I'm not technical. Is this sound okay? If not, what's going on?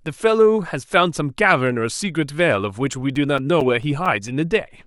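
No. CD scratch ticks run from 2.70 to 4.28 s: eight quick, evenly spaced ticks, each only a few thousandths of a second. A scratch on the disc spoils a bit of data on every turn, too much to repair, so the player patches or briefly silences those spots.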